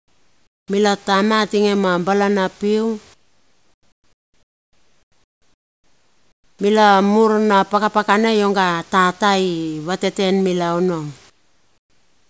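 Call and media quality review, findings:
Comfort noise in place of the background at 0.00–0.68 s, 3.14–6.59 s and 11.30–12.29 s: room ambience drops about 17 dB to flat, featureless hiss between phrases, likely DTX with receiver-generated noise.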